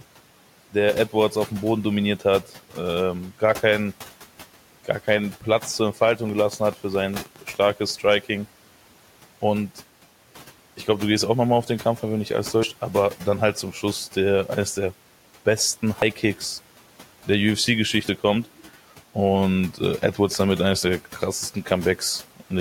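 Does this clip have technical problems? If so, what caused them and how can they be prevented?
Yes. From 6.29 to 7.91 s there is a train of clicks: about ten sharp, similar pulses at an irregular pace of roughly 5.6 per second, peaking around 10 dB above the speech. The likely cause is interference from nearby equipment or a faulty connection or power supply. Moving the interface and its cables away from other electronics and using shielded, well-seated connections should prevent it.

Dropped buffers (overruns) occur at 12.63, 16.02, 18.09 and 20.83 s. At each point the speech jumps forward, losing about 50, 70, 20 and 20 ms. This likely happens when the recording software fails to collect input samples before the hardware overwrites them. Increasing the buffer size and reducing CPU load during recording should prevent it.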